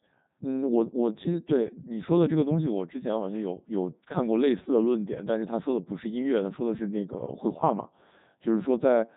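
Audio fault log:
Throughout: Codec 2 vocoder at 3.2 kbit/s. The voice is reduced to pitch, voicing, energy and a spectral envelope, then rebuilt from sine waves with the original waveform discarded, so the speech comes out robotic and buzzy, heavily damaged, with nothing above 3.8 kHz.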